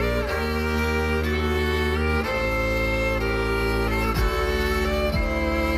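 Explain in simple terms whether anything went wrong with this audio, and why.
Nothing went wrong here.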